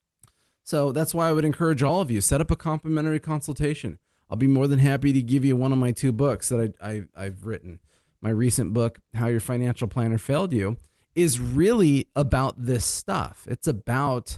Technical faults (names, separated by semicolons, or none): none